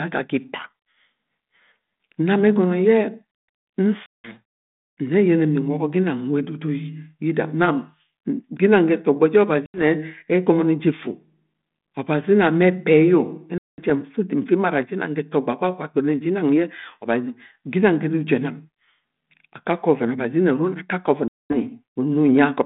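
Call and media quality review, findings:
Packet loss on an ADPCM call, four events: 4.06–4.36 s, 9.66–9.84 s, 13.58–13.91 s, 21.28–21.56 s. Symptom: hard-edged silent gaps of 180, 80, 200 and 220 ms, each followed by brief distortion before the speech settles. Probable component: network transport into a G.726 decoder, 32 kbit/s ADPCM with a 150 Hz to 3.6 kHz band. Mechanism: silence substituted for roughly ten lost packets per event (about four at 9.66 s) desyncs the adaptive predictor and step size from the sender's until the decoder re-adapts.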